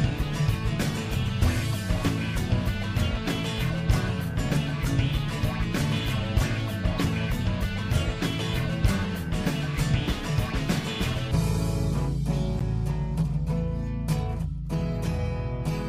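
A corrupt frame decoded at 6.98 to 7.00 s, then again at 12.59 to 12.62 s. Flipped bits in the compressed data were played back anyway, so misread gains and codes put energy at the wrong frequencies for the span of each damaged frame. The first error is short and quiet, peaking near -25 dBFS, which fits one bad frame. The second error is longer and louder, near -15 dBFS, which suggests two frames hit.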